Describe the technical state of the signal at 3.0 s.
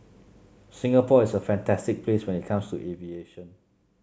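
At 3.0 s the speech is in the middle of a zipper noise run lasting from 2.62 to 3.26 s. The level is dropping by roughly 10 dB in unsmoothed 1 dB steps, around 30 per second, and each jump clicks, giving a fast ticking over the speech. On a waveform the envelope falls as a staircase; on a spectrogram the steps show as faint, regularly spaced vertical broadband lines.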